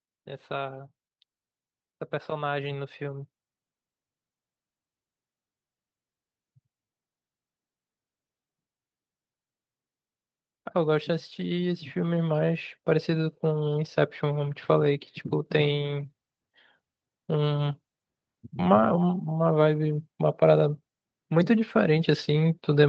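Automatic gain rising from 2.28 to 3.34 s and again from 10.71 to 17.73 s: the gain control judged the speech too quiet and pushed its gain up, about 4 dB then about 8 dB, so voice and background swell together.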